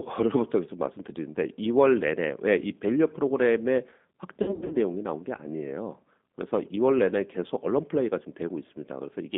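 Throughout, the speech carries G.729 codec damage: a band of about 200 Hz to 3.6 kHz and a rough, synthetic texture from pulse-coded excitation, which fits 8 kbit/s G.729A.

From 4.42 to 4.77 s, VoIP packet loss concealed by the speech codec produces fading extrapolated stretches. About 220 ms is missing, with runs up to 60 ms, and the voice stays weak or distorted afterward.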